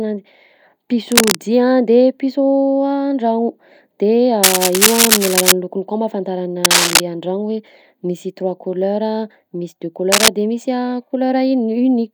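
Cable scratch noise, likely from a worn cable or connector being moved, breaks into the speech at 1.12–1.37 s, 4.43–5.52 s, 6.64–7.00 s and 10.12–10.28 s. The dense, ragged rasping rises to the speech's level and then slightly above it. Its bursts are uneven and gritty, not single clicks or low handling thumps.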